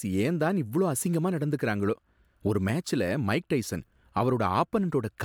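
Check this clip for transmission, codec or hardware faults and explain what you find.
Nothing stood out on listening to this speech recording.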